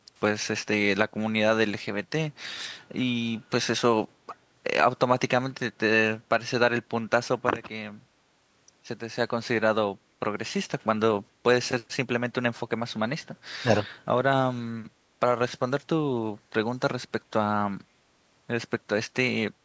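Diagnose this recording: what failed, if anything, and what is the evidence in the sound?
The call processing let a scrap of echo through. At 0.17 to 0.21 s there's a very faint, delayed copy of the speech trailing about 414 ms behind. That's an echo leak, likely a speakerphone's echo canceller missing a bit of what its microphone picked up and sending it back.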